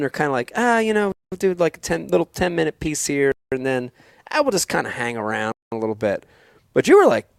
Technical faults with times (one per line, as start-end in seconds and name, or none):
1.12-1.32 gap between chunks
2.85-2.88 corrupt frame decoded
3.32-3.52 gap between chunks
5.52-5.72 gap between chunks